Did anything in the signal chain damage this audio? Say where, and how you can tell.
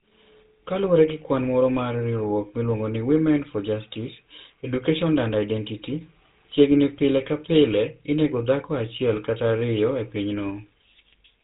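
Yes, the codec stage: GSM full-rate coding runs through the whole clip, leaving a buzzy, gravelly speech texture and nothing above 3.8 kHz, which fits that 13 kbps pulse-excited vocoder.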